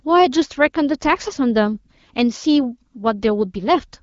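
Speech over AMR wideband (HD Voice); no technical faults.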